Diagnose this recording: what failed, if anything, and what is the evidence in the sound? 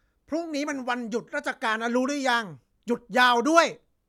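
Nothing failed in this recording.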